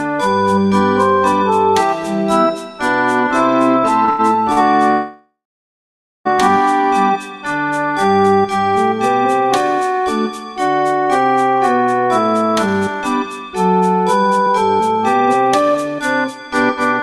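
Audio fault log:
4.05–4.21 s and 4.53–4.59 s, short stall from a late packet: the sound is held for about 27 ms, then 88 ms, then 41 ms while the jitter buffer waits for overdue packets, then resumes where it stopped. Nothing is lost. Unlike a freeze, there is only a brief stretched sound with a slight buzz or dip and no silence.
4.91–6.27 s, call audio freeze: the sound stops for about 1.34 s. The last sound trails into a fading buzz or hiss, then about 0.89 s of silence, before resuming with nothing missing. This is likely packets held up in transit emptying the jitter buffer. Its length and silent stretch set it apart from the short stalls.
11.78–17.02 s, jitter buffer speed-up: the receiver trims short pitch-period slices over and over to shed surplus buffered delay, about 0.3 s in all. The audio runs roughly 6% fast at unchanged pitch and sounds hurried. Unlike a stall, nothing is held or paused.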